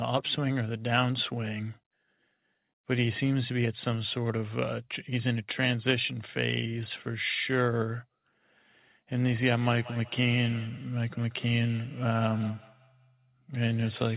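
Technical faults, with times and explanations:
9.3–14.16 s, feedback echo between two devices: the speech returns about a fifth of a second later, peaking about 18 dB below the original. A second device in the room replays the call, the microphone picks it up again, and the local echo canceller cannot remove it.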